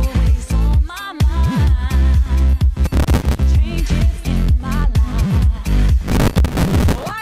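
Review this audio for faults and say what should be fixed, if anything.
The processor fell behind on its tiny buffers, about 3 ms each, repeatedly replaying stale audio. The result is a processor overload crackle, a gritty tearing from 2.85 to 3.39 s and again from 6.08 to 7.11 s. Prevent it by reducing processing load or raising the buffer size so each deadline can be met.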